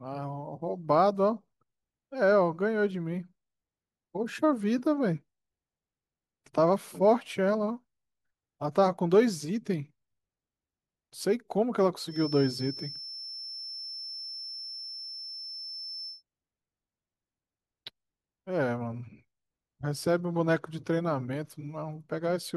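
It's a speech clip, and from 12.05 s to 16.23 s there's a feedback whistle: a thin, steady tone near 5.3 kHz sitting roughly 15 dB under the speech, swelling and fading slowly. Likely the speaker-to-mic loop was hovering right at the edge of feedback.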